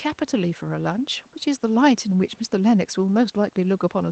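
Speech carried over a WebRTC call path with Opus coding, band-limited at 8 kHz and carrying the normal codec coding noise, with no technical faults present.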